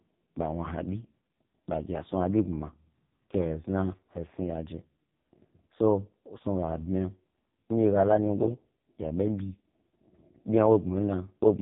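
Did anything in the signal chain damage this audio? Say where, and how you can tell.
Yes, at the codec stage, throughout: the speech carries heavy AMR narrowband mobile codec damage, with nothing above 3.8 kHz and a buzzy, synthetic voicing that fits AMR-NB's lowest 4.75 kbps mode. A plain telephone band-limit would cut the top similarly but keep the voice natural rather than pulse-modelled.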